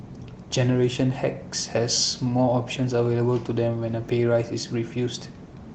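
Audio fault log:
1.77 s and 4.09 s, block of digital silence: the speech drops abruptly to silence for 0.67 ms, then for 2.67 ms, with no fade either way, so each gap is heard as a tick or dip. Lengths fit 32- and 128-sample output buffers left unfilled.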